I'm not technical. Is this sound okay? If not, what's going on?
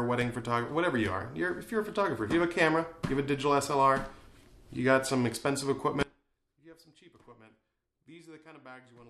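No. At 6.03 s there's an audio dropout to a faint residue: the sound cuts off abruptly and stays gone to the end, leaving only a faint trace far below normal. Unlike a fade or pause, it drops instantly, likely from a break in the signal path.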